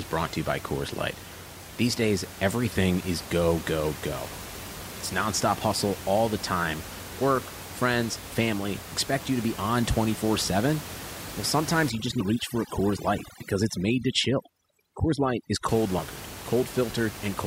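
From 11.9 to 15.7 s, overdone noise removal sets in: a noise reducer pushed too hard cuts individual frequency bands near the room noise floor, about 13 dB below the speech. The background drops and breaks up into twinkling specks.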